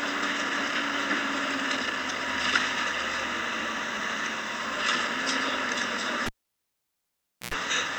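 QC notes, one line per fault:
6.26–7.54 s, cable pulled and plugged in: a pop, 1.23 s of near silence, then about 100 ms of 60 Hz mains buzz and a second pop, unlike a clean dropout.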